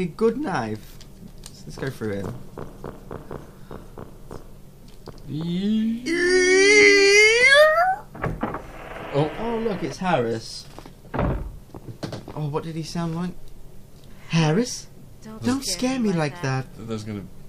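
No technical faults are audible anywhere in this audio.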